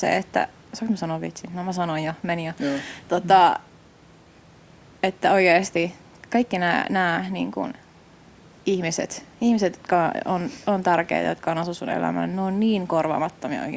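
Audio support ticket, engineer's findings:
No faults found in this speech recording. The call microphone processing works as designed: the lowest bass is rolled off by its high-pass filter, and nothing is present above 8 kHz.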